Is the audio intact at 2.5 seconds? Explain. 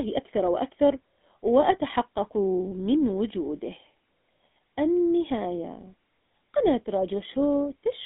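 No. At 2.5 seconds, as across the whole clip, the speech carries GSM full-rate codec damage. The codec rebuilds the voice from a vocal-tract model excited by a sparse, regularly spaced pulse train, which fits the 13 kbps GSM full rate. The result is a plainly audible buzzy, gravelly roughness. The sound is also squeezed into a telephone band of roughly 250 Hz to 3.6 kHz, with nothing above 3.7 kHz.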